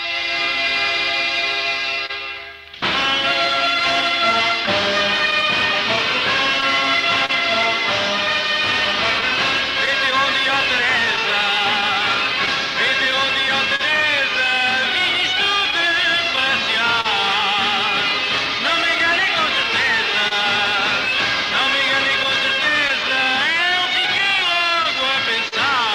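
Clock drift between sender and receiver runs through the whole clip. The sender's clock is slower, by about one and a half percent. The receiver's buffer keeps draining. To cope, it repeats tiny pieces of sound. Small timing hiccups recur throughout, at uneven intervals. Nothing sounds cut. The rhythm just stumbles now and then.

At 2.06 to 2.11 s there is a short stall from a late packet. A packet arrived 30 ms late and the buffer ran dry. The receiver held the last sound for 30 ms, then resumed from the same point. Nothing is lost. The sound lingers briefly, with a faint buzz or dip.

Scattered short gaps follow in five stretches. From 4.01 to 7.31 s there are about seven, totalling around 70 ms. From 9.21 to 13.81 s there are about seven more, around 100 ms in all, the longest near 40 ms. From 15.71 to 17.06 s there are three, around 50 ms. From 18.98 to 20.33 s there are three, around 40 ms. 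From 22.23 to 25.54 s there are about seven, around 100 ms. Each comes from a lost or late packet. The receiver patched each hole by extending the last sound. They are heard as brief ticks, smears and hiccups.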